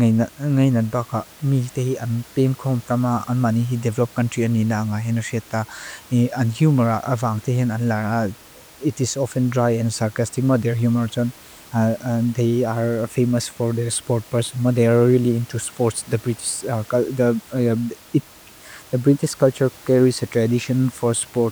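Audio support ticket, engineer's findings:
Nothing stood out on listening to the speech, with only the room's background noise present at about 25 dB below it.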